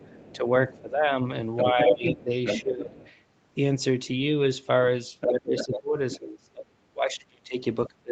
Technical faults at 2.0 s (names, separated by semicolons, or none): speech suppressed in double talk; other side's voice leaking through